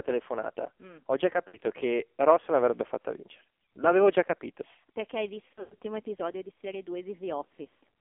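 Throughout, the speech carries AMR narrowband mobile codec damage. Everything sits between 300 Hz and 3.5 kHz, and the voice sounds heavily buzzy and synthetic, which fits a low mode near 5.9 kbps. A spectrogram shows a hard ceiling at 3.5 kHz with smeared, blocky harmonics.

From 1.48 to 1.72 s, lost AMR speech frames remove about 60 ms. The decoder stretches the last pitch with falling gain, so a brief warbling dip is heard. The waveform shows a short sag in level.

From 5.54 to 5.77 s, frames drop out scattered across 240 ms, totalling 160 ms, with a longest run of 120 ms. That run drags out and fades to silence before the voice returns rough. A spectrogram shows frozen, decaying harmonics and a gap.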